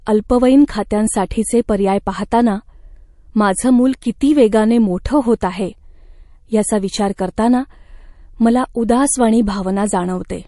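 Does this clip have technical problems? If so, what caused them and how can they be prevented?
Yes. Throughout the speech there is plainly audible MP3 compression damage, likely from encoding at a low bitrate. Nothing remains above 11.3 kHz, and the s sounds take on a watery, swirling quality as weak frequency lines flicker on and off between frames. The flickering separates it from a plain low-pass filter, which would dull the top end without this metallic churn. The damage points to roughly 48 kbps. Encoding speech at 128 kbps or higher, or using a lossless format, would prevent it.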